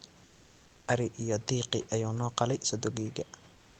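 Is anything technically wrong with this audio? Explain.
Yes. From 0.25 to 0.87 s, a stretch of about 620 ms, the background turns flat and lifeless. The room noise, sitting about 29 dB below the speech, gives way to a steady, featureless hiss about 1 dB quieter, with the natural texture of the room gone. This is comfort noise in place of the background, likely from Opus discontinuous transmission. The sender stopped transmitting during the pause, and the receiver filled the gap with synthetic noise shaped to resemble the background.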